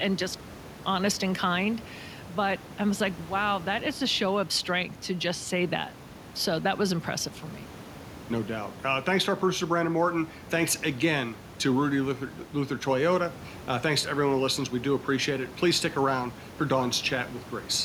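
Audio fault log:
No fault in this speech clip; the room noise heard beneath it sits about 18 dB below the speech.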